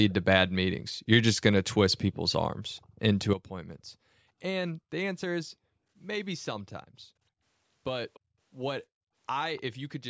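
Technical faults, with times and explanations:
0.09–0.13, 1.91–1.96, 2.81–2.86, 8.14–8.2 and 9.56–9.62 s, echo leak: faint scraps of voice return about 290–300 ms late, likely from a loudspeaker echo canceller missing them; thin repeated traces on the spectrogram.
3.33 s to end, sudden gain jump: voice and background noise drop together by 12 dB, likely an unramped digital gain change; the waveform envelope steps down abruptly.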